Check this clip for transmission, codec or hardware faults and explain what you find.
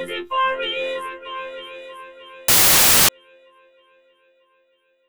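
One fault: samples built from the wrong bytes, from 2.48 to 3.09 s. The reader assembled each sample's bytes misaligned, so fast-changing low bits became the large values. It sounds like a burst of loud, harsh broadband noise. A spectrogram shows flat broadband energy, and the waveform a dense noise block.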